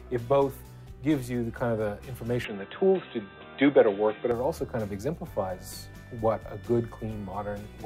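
From 2.45 s to 4.31 s the audio abruptly loses its top end, with nothing above 3.9 kHz, so it turns dull and boxy, then opens up again at 4.31 s. The switch has no gap. Level shifts by about 5 dB and a new, faint noise floor appears roughly 50 dB down. The cause is likely an input switched to a poorer device: a narrower-band microphone or headset path carrying its own tone, gain and background noise.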